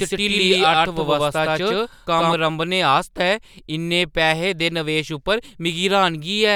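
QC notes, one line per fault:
0.00–2.34 s, doubled audio track: already running when the clip opens, a second full-band copy of the speech trails about a tenth of a second behind at roughly equal loudness, dry and uncoloured, then vanishes abruptly; likely a second, slower capture path mixed in.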